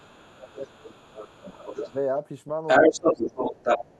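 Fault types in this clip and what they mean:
speech suppressed in double talk: The talker's level drops out while the far side is talking, likely the echo canceller turning both voices down. It hits 0.0 to 1.32 s, 1.52 to 1.96 s, 2.91 to 3.37 s and 3.79 s to the end, mostly dipping around 20 dB, the second one more like 10 dB.
other side's voice leaking through: A second voice comes through the mic, likely loudspeaker echo the canceller didn't fully remove. From 0.0 to 1.95 s it sits well under the talker, about 15 dB down. From 2.67 to 3.92 s it's actually louder, about 10 dB above.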